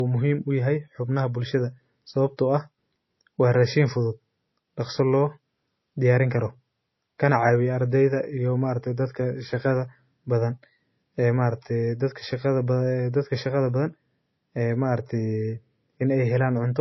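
Throughout the speech, the sound is dull and muffled, with nothing above 5.8 kHz and a smeared, watery edge. This is low-bitrate audio saved at a high bitrate: a very low-bitrate MP3, likely re-encoded at a high rate that cannot restore the lost detail.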